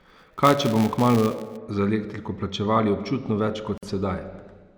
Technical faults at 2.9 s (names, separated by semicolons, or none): none